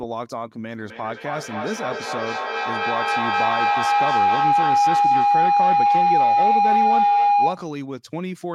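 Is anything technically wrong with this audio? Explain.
Yes. From 0.73 to 7.79 s there is feedback howl: two devices sharing a room and a call form a microphone-to-loudspeaker loop that gains level each pass, so it builds into a tone near 700 Hz, pulsing roughly every third of a second and peaking about 10 dB above the speech.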